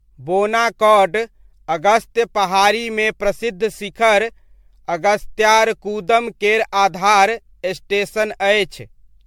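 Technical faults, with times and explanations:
Throughout: generation loss. The speech is swirly, hollow and smeared with blurred attacks, worse than a single MP3 pass near 100 kbit/s would cause, likely from about ten re-encodes.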